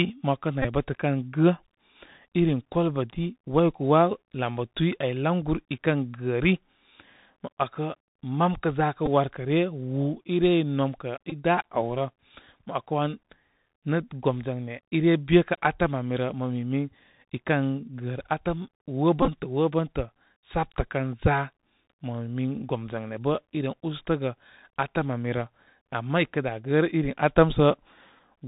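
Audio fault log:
Throughout: Bluetooth CVSD headset codec. Muffled with nothing above 4 kHz, scratchy s sounds and granular hiss, from one-bit adaptive-step delta coding that cannot follow loud high sounds.
0.62–0.67 s, 9.06 s, 11.30–11.33 s, 19.22–19.30 s: Bluetooth headset packet repeated. Brief buzzy ticks near 267 Hz as lost headset packets are replayed every 3.75 ms; the last event is scattered, with the longest run about 15 ms.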